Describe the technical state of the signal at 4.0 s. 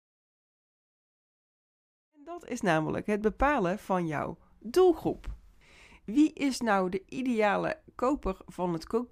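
At 4.0 s the speech signal is intact, with no fault present at that moment.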